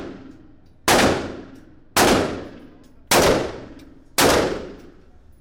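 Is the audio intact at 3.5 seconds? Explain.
Yes, the sound at 3.5 seconds plays through cleanly, with no dropout, click, distortion or other fault at that moment.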